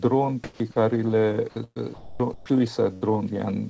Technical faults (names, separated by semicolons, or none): comfort noise in place of the background; sound dropped by the voice detector; burst of packet loss